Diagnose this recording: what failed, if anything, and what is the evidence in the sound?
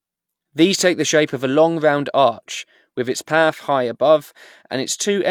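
Nothing failed: no stage from capture through playback leaves an audible mark anywhere in this speech recording.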